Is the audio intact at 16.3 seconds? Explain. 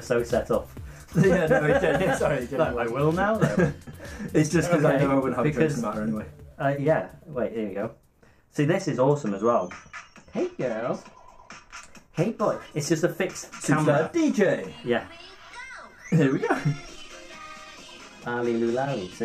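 Yes, the audio at 16.3 seconds plays through cleanly, with no dropout, click, distortion or other fault at that moment.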